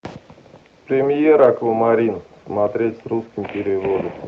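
A brief crackle on a speech peak at 1.43 to 1.46 s is hard clipping: the level overshoots the stage's ceiling by about 1 dB, flattening the peaks.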